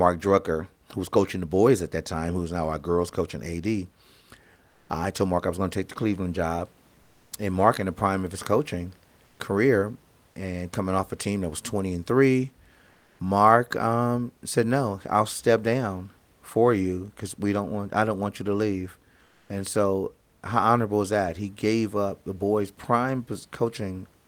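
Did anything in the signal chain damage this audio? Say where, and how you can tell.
Yes, in the codec. Comfort noise replaces the background at 4.69, 12.91 and 19.27 s. Room tone turns flat for 180 to 240 ms. Likely Opus DTX.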